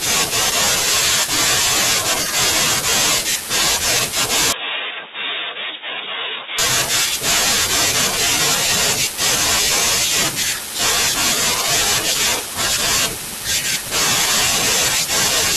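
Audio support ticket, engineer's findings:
Speech band-limited 4.53–6.59 s: nothing above 3.8 kHz, level drops about 10 dB, faint new noise floor far below the signal, no gap at either transition. Likely an input switched to a poorer device, such as a headset call profile, whose narrow passband and lower gain produce the dull, quieter stretch before full bandwidth returns.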